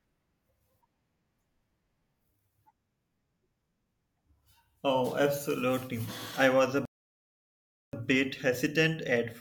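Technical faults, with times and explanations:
6.85–7.93 s, rebuffering stall: the player's buffer of downloaded audio ran dry, so playback halted until more data arrived, then picked up again. For just over a second the speech simply drops to silence, and when it returns it carries on from the exact point where it stopped, with nothing skipped or repeated. The only damage is the gap itself: about 1.08 s of dead air inserted into the speech, stretching the clip's timeline by that amount.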